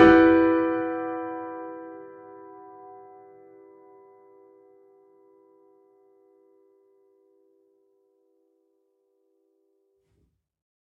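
No faults can be heard anywhere in this recording.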